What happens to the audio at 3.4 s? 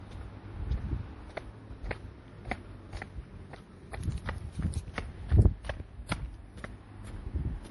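At 3.4 s the sound is dull and smeared, as it is through the whole clip. Nothing is present above 11.5 kHz. This is likely low-bitrate audio saved at a high bitrate: a lean MP3 encoding, perhaps near 48 kbit/s, re-saved at a much higher rate that cannot restore the lost detail.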